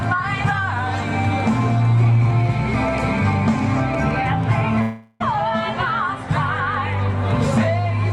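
From 4.81 to 5.22 s the sound becomes a buzzy, fading continuation of itself, then resumes with 0.38 s skipped. This is likely a long network dropout that the receiver concealed. A spectrogram shows smeared, repeating bands dimming, followed by an abrupt restart.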